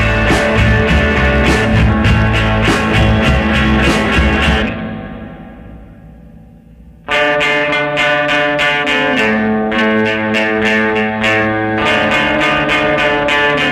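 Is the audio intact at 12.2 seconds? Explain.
No. Hard clipping runs through the whole clip, including 12.2 s. The signal is driven about 3 dB past what the stage can pass, so around one percent of samples have peaks sliced flat. Those flat tops add high harmonics, heard as brief crackle on the loudest moments.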